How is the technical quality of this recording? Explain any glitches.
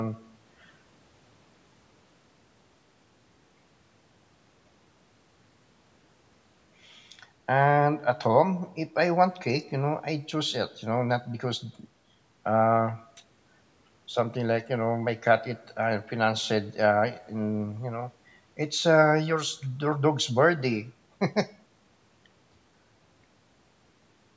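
The speech has no technical glitches: it passed through a call's microphone processing, which trims the lowest bass and carries nothing above 8 kHz, and that is simply how such a path shapes the sound.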